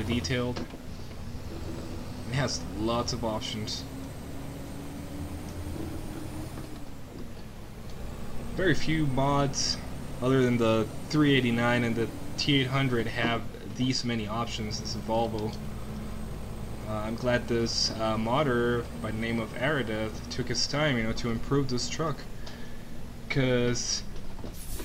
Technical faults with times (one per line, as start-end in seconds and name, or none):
none